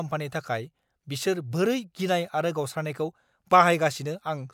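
Speech recording with no technical faults heard.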